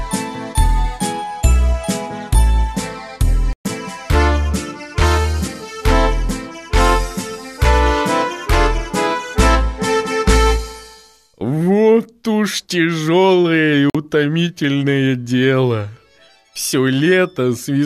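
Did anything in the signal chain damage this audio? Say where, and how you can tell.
Yes. The damage happened at the broadcast reception stage, as a digital broadcast dropout. The sound drops to silence at 3.53 s and stays gone until 3.66 s, a hole of 120 ms. A shorter hole follows at 13.90 to 13.95 s, lasting 48 ms. Both gaps are clean mutes, not noise. That points to a receiver losing the signal or rejecting corrupted frames, then muting until good ones returned. The lengths fit about five and two frames of 24 ms. The audio in those gaps is lost.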